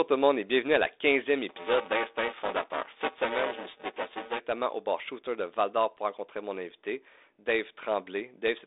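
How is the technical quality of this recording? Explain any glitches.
The recording has one clear glitch, a stretch of buffer tearing. The speech comes through a G.726 ADPCM telephone path at 32 kbit/s, confined to roughly 300 Hz to 3.7 kHz, with nothing above 3.8 kHz and light coding grain.

From 1.49 s to 4.39 s, ending just before "au bar", buffer tearing puts a robotic buzz on the speech. The program filling the playback ring buffer and the hardware draining it have drifted out of step, so the read point crosses the write point in every period. About a third of each buffer therefore replays audio from a few milliseconds earlier, with hard joins on both sides. The buzz repeats at 345 Hz, which fits a 128-sample buffer at 44.1 kHz. It is present only while there is speech. On a spectrogram it appears as evenly spaced harmonic lines from 345 Hz upward through that stretch. On the waveform it shows as regular step discontinuities every buffer.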